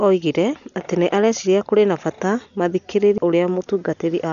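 Throughout, the speech is dull with nothing above 7 kHz and rough, fluttering noise around tones, heavy damage likely from Dolby Digital compression at a bitrate near 48 kbps. At 3.18 s a CD skip occurs: the laser jumps tracks, giving a tick, a mute of a few milliseconds, and an abrupt jump in the audio.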